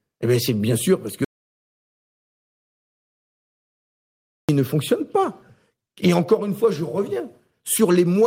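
A speech recording runs with a sender clock about five percent faster than the receiver's, a clock drift between sender and receiver that persists for the whole clip. With samples arriving faster than they are played out, the jitter buffer keeps overfilling, so the receiver must keep discarding small slices of audio to hold its latency steady. On a waveform this shows as tiny splice points where the cycle shape jumps, and on a spectrogram as faint vertical seams across the harmonics. Those repeated timing corrections span 0.09 s to 8.22 s, amounting to playback compressed to roughly 105 percent speed. Each cut drops only a short piece, always removing rather than repeating audio, at uneven spacing, so the result sounds like slight hiccups and a faintly hurried, unsteady rhythm rather than clear jumps. From 1.25 s to 4.49 s there is an audio dropout to silence lasting about 3.24 s. The sound stops abruptly mid-flow and resumes just as abruptly, with nothing in between, not even room noise. 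The waveform goes flat and the spectrogram shows a dark block with no noise floor. The likely cause is a lost input or link while recording continued.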